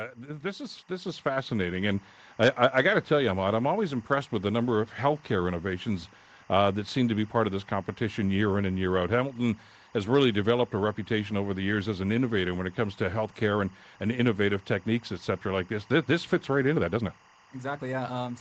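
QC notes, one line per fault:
Throughout: timecode bleed. A thin chirping warble sits behind the speech for the entire clip, around 30 dB below it. It flips between two pitches near 1 and 2 kHz. That is the sound of linear timecode, a square-wave code leaking into the audio path from an adjacent track or cable. Its rhythm fits 24 fps code.
0.17–5.96 s: automatic gain rising. Over nearly six seconds, speech and background noise grow louder together by about 9 dB. An automatic gain control that judged the input too quiet was raising its gain in gradual steps rather than all at once. Because the gain acts on everything entering the microphone, the room noise climbs along with the speech.
16.72–18.41 s: time-stretched section. For the final stretch of the clip the pace jumps abruptly to roughly 1.53 times normal speed while the pitch stays where it was. The result sounds rushed. This is likely from software squeezing the passage to fit a set length, dropping short segments to shorten it without raising the pitch. 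Audio above 8 kHz is absent in this section as in the rest, consistent with the call processing's bandwidth.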